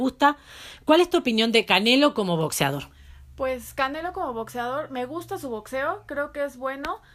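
A single sharp click at 4.30 s cuts through the speech, most likely dropped samples: roughly one sample went missing, so the waveform jumps abruptly.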